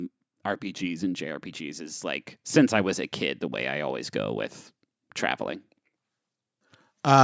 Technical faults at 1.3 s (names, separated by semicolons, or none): automatic gain rising